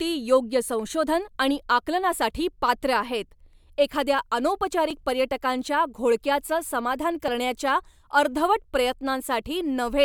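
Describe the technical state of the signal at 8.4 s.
At 8.4 s the speech signal is intact, with no fault audible at that moment.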